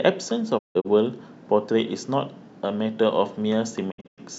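Digital broadcast dropout twice, at 0.57–0.87 s and 3.90–4.20 s: the receiver muted on bad frames, so the speech fades out in 20 ms into short silent holes, the longest 160 ms and then 96 ms.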